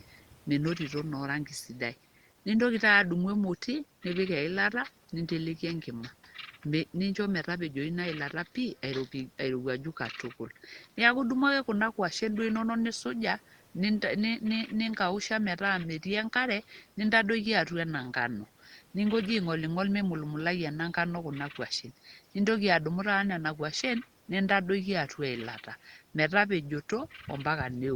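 No technical faults can be heard in this recording.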